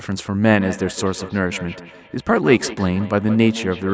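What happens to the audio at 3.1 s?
The speech is trailed by repeats roughly every 150 ms, up to about 13 dB below it, from 0.51 s to the end. This is feedback echo between two devices: one replays the other's call audio into its microphone.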